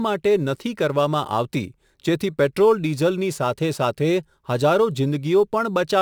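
Speech runs through a crude rate conversion for its whole length. A gritty, inharmonic fizz rides on the louder and brighter syllables, sitting roughly 30 dB below the speech. The pattern fits a nearest-sample change from 44.1 kHz to 48 kHz, with about every eleventh sample repeated and no smoothing filter. Plain quantisation noise is not tied to the signal this way. This error follows the speech's level and treble and adds tones unrelated to its pitch.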